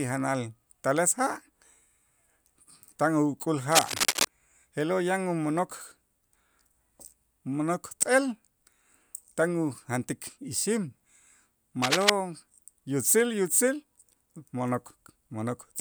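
A worn cable, connector or control was likely being moved, its contact resistance jumping about and injecting dense, uneven bursts of noise into the speech. The result is cable scratch noise: a rough scratching and rustling laid over the sound, about as loud as the speech itself, first from 3.69 to 4.26 s and again, more briefly, from 11.82 to 12.10 s.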